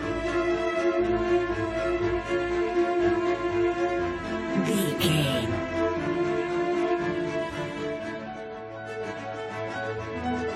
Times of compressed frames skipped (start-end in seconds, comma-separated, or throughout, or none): 9.16